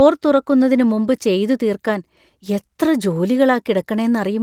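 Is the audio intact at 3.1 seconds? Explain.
Yes, at 3.1 seconds the speech is intact, with no dropout, click or other fault at that moment.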